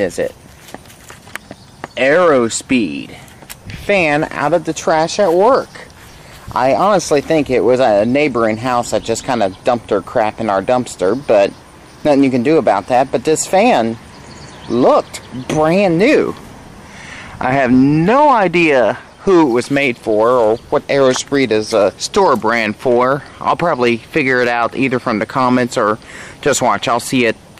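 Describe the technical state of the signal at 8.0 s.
At 8.0 s you're hearing hard clipping, and it isn't local to that moment. It runs through the whole clip. The level was pushed about 6 dB past what the chain could pass, so the peaks get sheared off flat. Only a small slice of samples, somewhere around one or two percent, actually hit the ceiling. Those squared-off tops throw harmonics way up the spectrum, which comes through as a crackly edge on the loudest moments.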